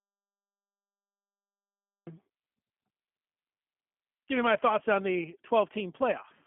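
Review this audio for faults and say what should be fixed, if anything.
Audio dropout to silence runs from the start of the clip to 2.07 s. The audio is already gone when playback begins and returns mid-flow, with no room tone at all in the gap, so the input was likely lost and the recorder kept writing silence. To prevent it, check the input connection and mute state before recording, and monitor levels from the first second.

G.729 codec damage is audible throughout. The speech has the rough, synthetic quality of a low-rate model that rebuilds each 10 ms frame from a filter, a pitch predictor and a few pulses. The band is confined to about 150 Hz to 3.4 kHz, with nothing above 3.8 kHz, which fits 8 kbit/s G.729A. To prevent it, record or route the call through a wideband codec at a higher bitrate instead of this narrowband path.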